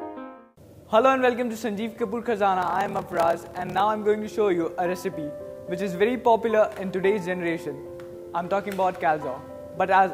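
From 2.60 to 3.82 s the audio shows a block size mismatch (padded). A steady buzz at 38.3 Hz runs through that stretch. It comes from a short gap of silence inserted into every block. One stage writes shorter blocks than the next stage reads, and zeros fill the remainder. The pattern fits 1024-sample blocks being written. Playback runs slower, at 0.889 times normal speed, while the timbre stays the same.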